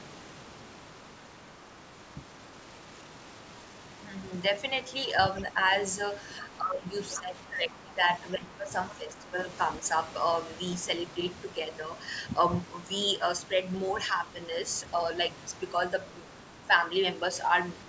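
Residual echo, likely from the far end's loudspeaker audio escaping the echo canceller, brings the other side's voice leaking through faintly at 1.17 to 1.76 s, about 35 dB below the talker, then briefly at 5.37 to 5.42 s at about 20 dB down. From 6.4 to 6.98 s, speech is suppressed in double talk: the canceller likely mistakes the talker for echo while both sides speak and pulls the voice down by about 15 dB. Another scrap of leaking voice, quite strong at about 15 dB below the talker, appears at 7.12 to 7.18 s. Suppression follows at once from 7.17 to 8.02 s, dipping about 15 dB, and again at 8.37 to 8.71 s, where the voice drops by about 20 dB. The far side's voice leaks through once more at 8.91 to 8.95 s, about 25 dB down. A final, milder suppression at 8.98 to 9.47 s pulls the talker down by about 10 dB.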